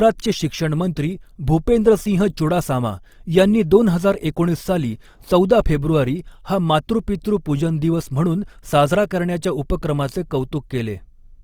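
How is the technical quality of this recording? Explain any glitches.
The recording carries plainly audible codec damage for its whole length. Opus compression, likely the cause, runs throughout. With too few bits, the encoder's music mode fills thin bands with folded or noise content, consistent with a low bitrate near 24 kbps, so the speech sounds grainy and rough though bandwidth reaches about 20.2 kHz.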